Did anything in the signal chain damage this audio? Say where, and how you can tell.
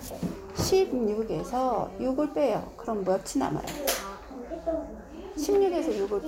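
No, nothing in the signal chain damaged this audio.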